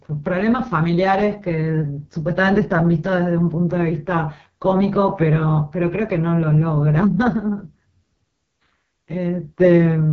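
From start to finish the speech carries AMR wideband (HD Voice) codec damage. Nothing sounds above 7.2 kHz, and the heavy, rough, raspy texture of the voiced sound points to the codec's lowest mode, which fits 6.6 kbit/s, where its vocal tract model runs short of bits.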